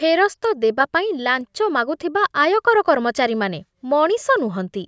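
Listening to the speech recording, nothing technical stood out.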